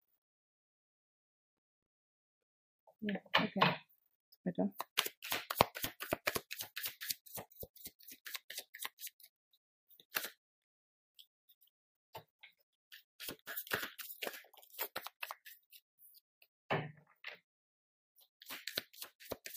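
At 14.19 s the level falls abruptly by about 6 dB and stays down until the clip ends at 19.57 s, with no ramp or recovery. The sound is most likely a one channel drops out fault: one side of the stereo signal vanishes, so material shared by both channels loses half its amplitude in the mono sum. Unlike a plain gain drop or fade, the step is instant and sits at about 6 dB.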